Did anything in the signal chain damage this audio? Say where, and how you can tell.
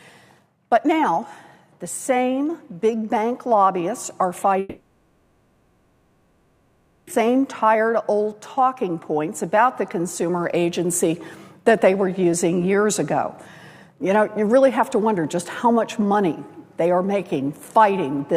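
Yes. The damage is at the network stage, most likely a long network dropout. From 4.59 s to 7.09 s, about 2.5 seconds of audio never arrived. For almost that entire gap, the receiver's concealment extends the last sound it had into a buzzy, hissy continuation that fades into a low steady noise rather than true silence. When the audio resumes at 7.09 s, it picks up further on, and the missing 2.5 seconds are simply gone.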